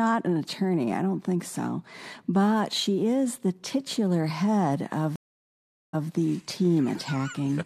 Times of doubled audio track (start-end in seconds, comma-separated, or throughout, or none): none